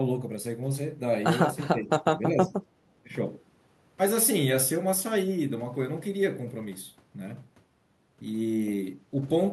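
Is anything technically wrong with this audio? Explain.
Yes. From 1.7 to 2.55 s, and briefly from 3.04 to 3.09 s, the speech dips by roughly 10 dB, in pieces totalling about half a second. This is likely speech suppressed in double talk: with both sides talking at once, the echo canceller mistook the talker for loudspeaker echo and turned them down.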